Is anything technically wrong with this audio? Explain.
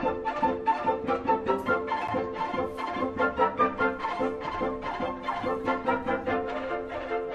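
Yes, there's a CD skip at about 2.07 s. A knock or a disc flaw threw the laser onto another turn of the spiral, so the player drops out for a few milliseconds, ticks, and picks up from a different point in the audio.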